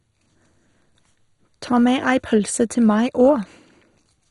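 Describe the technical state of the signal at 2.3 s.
At 2.3 s the speech carries the same degradation present across the whole clip, most likely MP2 compression at a low bitrate, around 56 kbps. Starved sub-bands are dropped or coarsely quantised, so nothing remains above 11.2 kHz and the sound is dull, gurgling and granular.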